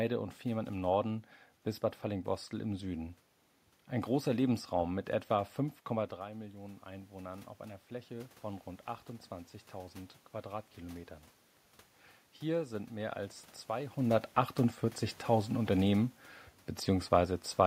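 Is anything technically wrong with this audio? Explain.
Yes. From 6.17 to 11.16 s there is automatic gain rising. Around 6 s the talker moves away and the level drops by about 13 dB. The gain control responds by slowly raising its gain by about 6 dB, so the voice and the room noise swell together over those five seconds.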